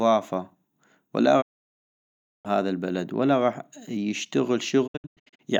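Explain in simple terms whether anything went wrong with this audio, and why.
Two digital broadcast dropouts here. The receiver lost good data and muted, so the speech goes silent from 1.40 to 2.47 s, and again from 4.86 to 5.41 s as several short holes, the longest about a tenth of a second. Whatever was said then is gone.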